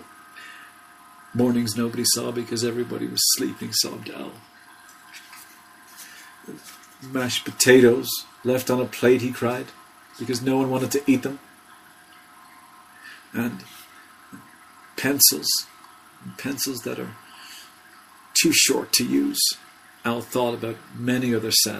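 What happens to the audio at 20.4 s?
Nothing goes wrong at 20.4 s: the audio carries on intact through that moment, with no dropout, click, distortion or other fault to be heard.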